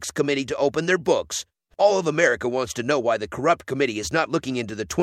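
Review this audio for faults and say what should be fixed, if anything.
Nothing to fix here: I couldn't hear any technical fault anywhere in the speech, so it can stay as it is.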